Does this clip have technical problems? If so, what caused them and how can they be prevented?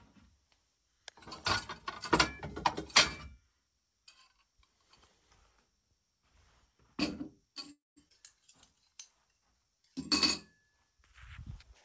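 Yes. There are three faults, all close together.

From 7.72 to 7.98 s there is a call audio freeze. The sound trails off as a fading buzz and then goes silent for about 0.18 s. The likely cause is packets held up in transit, so the jitter buffer ran dry. When the audio resumes, it picks up exactly where it stopped. Nothing is lost, but about 245 ms of delay has been inserted. A larger or better-tuned jitter buffer, on a steadier network, prevents this.

At 8.08 to 8.12 s the audio skips ahead. Roughly 150 ms of sound is missing. The two sides of the jump are joined almost directly, with only a tiny fill between them. Playback has jumped forward, trimming back much of the delay the freeze added. The audio was dropped in transit or by the buffer while later audio was already waiting. A buffer that shrinks its delay gradually instead of dropping chunks prevents this.

From 8.73 to 9.95 s there is a jitter buffer slow-down. 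The sound plays at about 89% speed while keeping its pitch. Sounds are audibly drawn out. The receiver was rebuilding its reserve by repeating short pitch-period segments, stretching this stretch by 143 ms in total. Stable packet timing, so the buffer rarely needs to refill, prevents this.

The call path is G.722 at 64 kbps, with nothing above 8 kHz.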